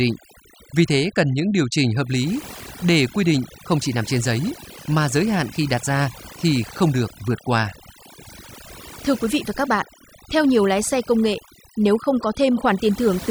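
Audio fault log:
Throughout: overdone noise removal. The noise reduction was set too hard, so frequency bands near the estimated noise floor are pulled down or dropped, taking quiet parts of the voice with them. Between phrases the background drops and breaks up into twinkling specks.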